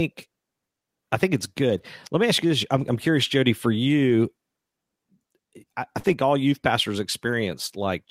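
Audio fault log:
1.77 to 1.79 s and 4.09 to 4.11 s, lost packet rebuilt from error correction: each is a 20 ms patch that turns rougher and noisier with no gap. A single lost packet is the likely cause. The next packet carried a low-bitrate copy of it, and the decoder played that copy in place of the original.
5.99 to 6.06 s, short concealed packet loss: a brief smear or wobble in the speech lasting about 42 ms. Roughly 40 ms of audio did not reach the decoder in time. The receiver filled the hole by carrying the last sound forward, either continuing its pitch or as shaped noise, and then blended back into the real signal.
6.04 to 6.14 s, lost packet rebuilt from error correction: 60 ms of rougher, noisier speech follows directly on the smear, again without a gap. This fits three lost packets whose low-bitrate copies, carried in the following packets, were decoded in their place.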